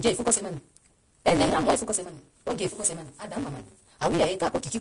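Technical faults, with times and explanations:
Throughout, block size mismatch (truncated): the speech runs about 1.88 times too fast but keeps roughly its normal pitch, and a steady buzz at 172 Hz sits under it. The writing stage hands over longer blocks than the reading stage takes, and each block's tail is discarded. That fits a 256-sample read. On a waveform, abrupt joins recur every 5.8 ms. A spectrogram shows a 172 Hz harmonic comb spread across all the speech.
Throughout, Vorbis compression: the speech sounds hissy and grainy, with roughened voiced tones and smeared consonant onsets. The damage is plainly audible and is likely from Vorbis coding at a low bitrate, around 35 kbps. The coarse quantisation turns fine treble detail into noise of similar energy. A spectrogram shows a hard ceiling with nothing above 10.6 kHz and speckled, blotchy texture in the upper bands where the harmonics should be clean lines.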